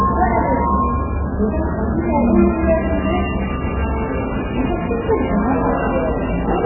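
A recording of everyday sounds that plays dull and boxed-in from start to finish, with a watery, swirling texture and metallic chirping on any hiss-like content. Nothing is left above about 2.9 kHz, and sharp onsets come through smeared rather than crisp. The likely cause is heavy MP3 compression at a starved bitrate, which fits something as low as 8 kbps. With so few bits, the encoder chops the treble at a fixed cut-off and discards weak frequency components. Those components then flicker in and out from frame to frame, producing the swirl.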